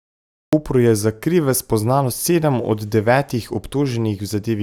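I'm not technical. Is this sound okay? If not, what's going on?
No. For the first half second or so there's dead silence, and then at 0.53 s the speech jumps in abruptly, already mid-sound, with no natural build-up. That's a cut-off start: the recording or stream began a moment too late, so the beginning of what was being said never got captured. Instead of easing in, the audio snaps straight from nothing into the middle of the speech.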